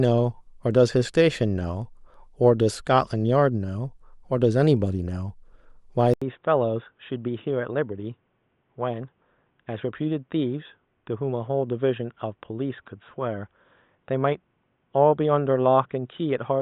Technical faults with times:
6.14-16.61 input switched to a poorer device

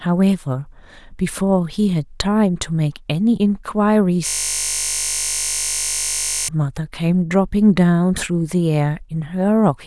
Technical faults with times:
4.27-6.48 system hang loop

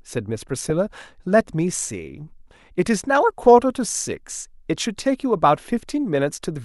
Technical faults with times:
0.66-0.70 corrupt frame decoded
1.74 block of digital silence

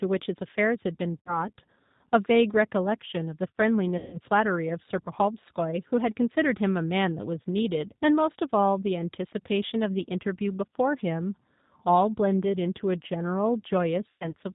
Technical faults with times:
0.00-14.55 G.729 codec
1.21-1.51 VoIP packet loss concealed by the speech codec
3.98-4.20 VoIP packet loss concealed by the speech codec
14.09-14.33 VoIP packet loss concealed by the speech codec

